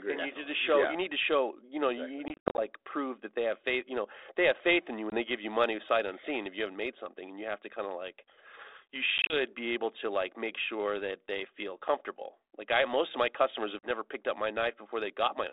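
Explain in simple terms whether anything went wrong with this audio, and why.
Packet loss on an ADPCM call: chunks of audio went missing at 2.28–2.62 s, 5.1–5.17 s, 9.18–9.36 s and 13.79–13.9 s, leaving abrupt silent gaps followed by briefly distorted speech while the decoder resynchronises.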